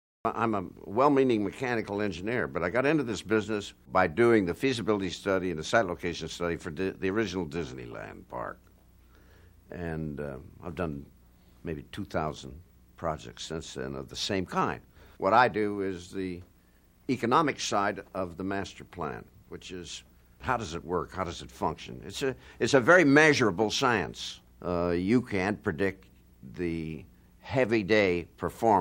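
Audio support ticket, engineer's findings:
No faults found in this audio; nothing to report in the engineer's findings.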